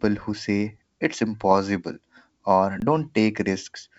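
From 1.51 to 1.57 s, just after "who say it's", bit errors on the ADPCM link corrupted the decoder's step size and predictor, producing a rough, popping burst with brief level jumps. At 2.80 s, an underrun with held sample leaves the output frozen at its last value for 20 ms, a flat silence that ends at 2.82 s as audio resumes after the lost stretch.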